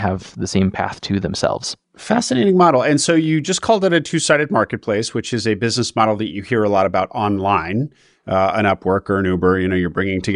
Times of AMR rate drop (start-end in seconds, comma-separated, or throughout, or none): none